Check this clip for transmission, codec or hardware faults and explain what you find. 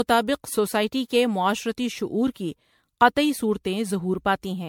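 The speech shows generation loss throughout, the likely result of the audio passing through an MP3 encoder around seven times. Each decode and re-encode quantises the signal again on a shifted frame grid, so the noise and spectral holes pile up rather than staying fixed. The result is a swirly, hollow texture with smeared consonant attacks, heavier than a single pass would leave. The band stops at 19.8 kHz, which fits a 96 kbit/s MP3 chain.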